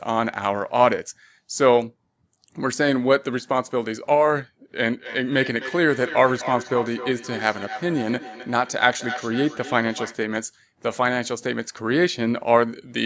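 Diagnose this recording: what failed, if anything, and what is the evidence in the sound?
Feedback echo between two devices, at the call-processing stage: two devices in the same room were joined to one call, so one device's loudspeaker played back audio the other had captured, and that microphone picked it up again. Each device's echo canceller removes only its own playback, so the loop went unchecked. From 4.91 to 10.24 s the speech returns after roughly 300 ms, peaking at about 11 dB below the direct speech, inside the call path's 8 kHz band limit.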